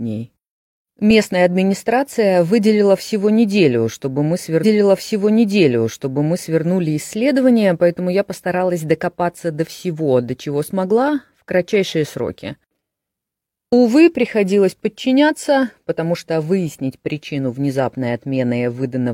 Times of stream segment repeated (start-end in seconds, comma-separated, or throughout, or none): 4.60-6.60